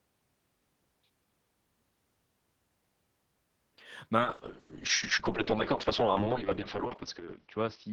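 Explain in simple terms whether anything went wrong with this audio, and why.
Around 4.2 s the sound gets muffled and rough, and it stays that way to the end. That's a call bitrate drop: the connection seemed to shrink, so the encoder squeezed the audio much harder and cut off everything above roughly 6 kHz.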